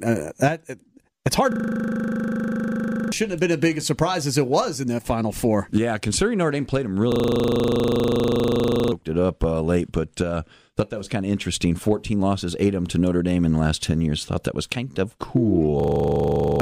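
The system froze three times while the sound hardware kept replaying the same 40 ms of its ring buffer, a system hang loop. Each freeze gives a steady 25 Hz buzz, from 1.52 to 3.12 s after "it's hard", from 7.12 to 8.92 s after "played them", and from 15.8 to 16.6 s. About one and a half seconds, two seconds and under a second of speech are lost, and the first two resume at "have been as big" and "it up uh late".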